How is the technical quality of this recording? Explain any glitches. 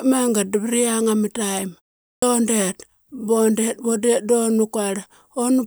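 The recording has one audible glitch, a swallowed onset after a short gap, near the 2-second mark.

Clipped start after a pause, 2.09 to 2.22 s: after a gap of about 0.36 s, the output device appears to drop into a low-power or unlocked state, and it needs time to wake and resynchronise before it passes sound again. During that recovery the first 134 ms of the returning speech is lost. The speech therefore begins abruptly out of silence, its opening sounds cut away.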